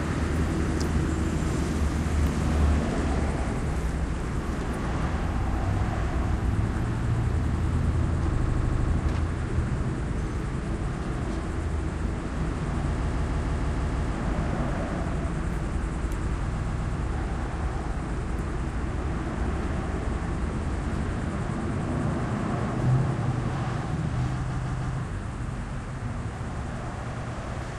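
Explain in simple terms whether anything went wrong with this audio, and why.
Repeated frames make the sound stutter at 8.35, 13.03, 16.55, 24.49 and 27.11 s. Short chunks of compressed audio, about 0.08 to 0.16 s long, play again and again, adding time.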